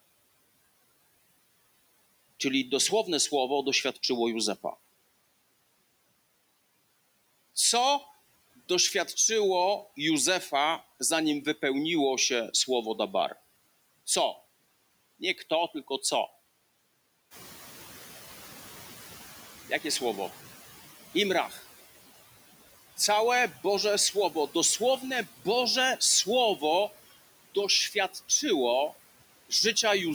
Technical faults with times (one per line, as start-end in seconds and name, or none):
0.00-30.14 noise suppressor artifacts
17.30-19.42 noise suppressor catching up
21.49-21.60 speech cut by the noise suppressor